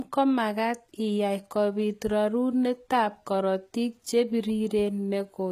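Speech is band-limited for the whole clip, with nothing above 14.9 kHz and compression artefacts despite a large MP3 file. This is likely low-bitrate audio saved at a high bitrate. The damage points to an earlier low-bitrate encode, such as HE-AAC around 20 kbit/s, and the later high-rate MP3 pass could not restore what that encode removed.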